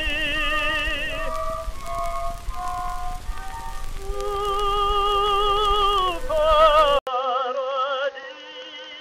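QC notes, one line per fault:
6.99–9.00 s, input switched to a poorer device. The sound drops out for 80 ms, then returns duller and boxier. Nothing is heard above 6.5 kHz from here to the end, so the top end is gone. The level falls by roughly 5 dB. A new background noise sits roughly 30 dB under the signal. The input likely moved to a lesser microphone or a headset call profile, with its own narrow band, tone and noise floor.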